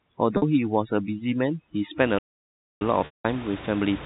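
From the start to 2.0 s, the gaps between phrases drop to near silence with twinkling specks where the room noise, about 16 dB below the speech, should be. That is overdone noise removal. An over-aggressive noise reducer is switching off individual frequency bands whenever they come close to its noise estimate, and it takes the softer parts of the speech away with the hiss.

Inside that stretch, at 0.37 to 0.42 s, a brief buzzy, slightly held tone replaces about 50 ms of speech. That is packet loss with pitch repetition. The missing audio, which fits roughly five 10 ms packets, was bridged by repeating the last pitch period. The gap was short enough that the repeat stayed audible as a held note instead of fading out.

At 2.18 s the sound cuts off mid-flow and stays silent until 2.81 s, a gap of about 0.62 s, before carrying on. This is a playback stall. The output halted, likely because the player ran out of buffered data or its audio thread was blocked, and sound resumed only once it recovered.

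A longer packet loss with pitch repetition follows at 3.05 to 3.25 s, covering about 190 ms. Here the repeated pitch period fades into silence, and the speech comes back through a short cross-fade. The narrow telephone band, with nothing above 4 kHz, comes from the G.711 coding and is heard throughout.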